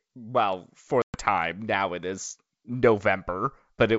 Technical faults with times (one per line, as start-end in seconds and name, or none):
1.02-1.18 packet loss on an ADPCM call
3.03 bit error spike